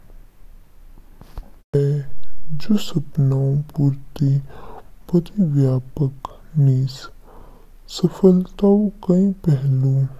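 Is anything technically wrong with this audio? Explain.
Yes. A wrong sample rate affects the whole speech clip. The audio plays at about two-thirds of its proper speed, 0.667×, and pitch falls by about 7.0 semitones, which fits 48 kHz material played back at 32 kHz with no conversion. Because the samples are clocked out too slowly, duration and pitch shift together by the same ratio, so the voice sounds deep, dragged and sluggish, with syllables stretched and the natural cadence slowed throughout.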